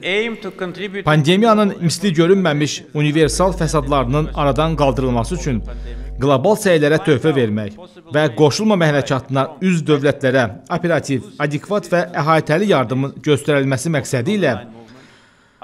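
From 3.22 s to 6.24 s, a steady low tone sits under the sound. This is mains hum at 50 Hz. Power-line current has leaked into the signal path, likely through a ground loop or a nearby transformer. The hum is strong, roughly ten decibels below the wanted sound. It holds a constant pitch and level throughout. At 6.24 s it stops cleanly.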